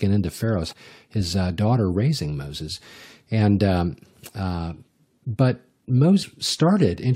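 Speech clip with damaged data in the compressed stream, heard as brief glitches at 0.71–0.73 s, just before "his daughter raising", and at 6.21–6.23 s, where corrupted frames made the decoder misread and resynchronise.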